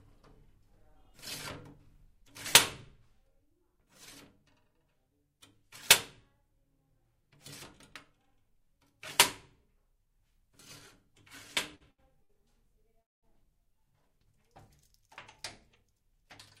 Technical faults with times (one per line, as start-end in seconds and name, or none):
11.75-12.31 short stall from a late packet
13.01-13.25 call audio freeze
15.68-16.23 jitter buffer speed-up